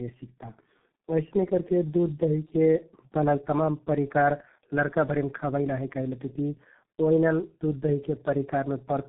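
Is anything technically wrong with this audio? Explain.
Yes. Tandem speech coding runs throughout: the speech passed through G.729A, then G.711, then G.723.1, so two low-rate speech coders each rebuilt an already degraded signal. It sounds rough, muffled and warbly. A spectrogram shows smeared harmonics and nothing above 3.8 kHz.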